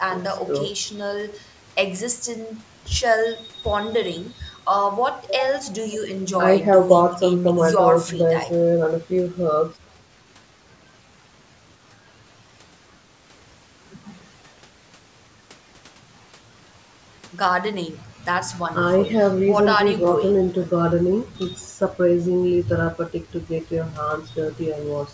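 No faults found in this speech; the bass roll-off and the absence of content above 8 kHz come from ordinary call microphone processing.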